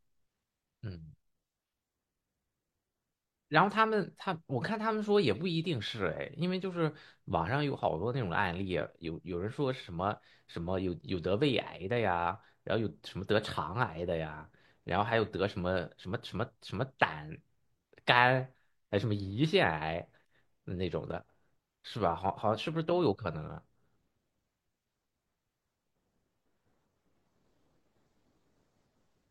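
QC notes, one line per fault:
No faults heard.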